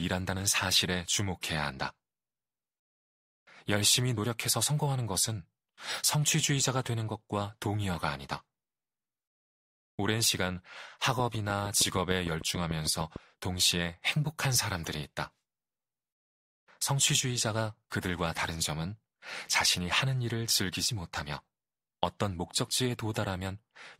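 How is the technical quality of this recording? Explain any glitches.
One glitch stands out in this speech recording. From 11.2 to 13.17 s, a train of clicks ticks through: about fifteen regular pops, 6.6 per second, about 10 dB above the speech, likely from nearby interference.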